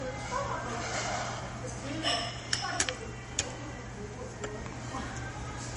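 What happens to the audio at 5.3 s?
At 5.3 s the sound carries the same MP3 compression damage heard across the whole clip. The treble stops dead at about 10.6 kHz, and the encoder switches weak frequency lines on and off between frames. That gives a watery, swirling texture with metallic chirps on bright detail and smeared attacks. The damage is plainly audible and fits a low bitrate of around 40 kbps. On a spectrogram there is a flat ceiling at 10.6 kHz and flickering holes below it.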